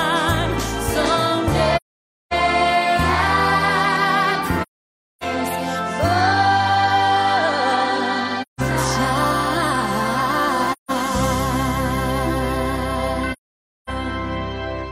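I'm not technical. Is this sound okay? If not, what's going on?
No. The audio drops out five times, at 1.76 to 2.33 s, 4.62 to 5.24 s, 8.42 to 8.60 s, 10.72 to 10.91 s and 13.32 to 13.90 s. This is AAC frame loss with muting: chunks of the compressed stream went missing, and the player filled each gap with silence. The sound fades out into each hole and back in afterward. Three gaps last over half a second and the two at 8.4 and 10.7 s are under a fifth of a second.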